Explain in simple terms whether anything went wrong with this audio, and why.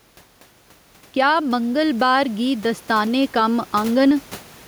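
Gain pumping runs through the whole recording: loud and soft parts end up closer in level, so the sound is squashed. The likely cause is a microphone set far too hot, with a fast limiter clamping down on loud moments. The room noise itself stays faint.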